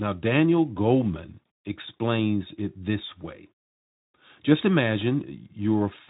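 No technical faults are audible in this speech.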